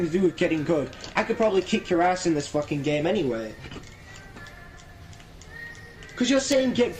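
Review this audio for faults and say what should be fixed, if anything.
Clock drift between sender and receiver runs through the whole clip. The sending clock is slower than the receiver's by roughly 3 percent, so the jitter buffer keeps draining and the receiver must pad the stream to avoid running empty. Prevent it by locking both ends to a common clock or adding adaptive resampling at the receiver.

Repeated timing corrections occur from 0.25 s to 6.95 s. The receiver repeatedly inserts short repeated pieces, all lengthening the audio, roughly 200 ms in total. Playback runs at 97 percent speed. Prevent them by replacing discrete repeat-based corrections with continuous, fine-grained rate adjustment.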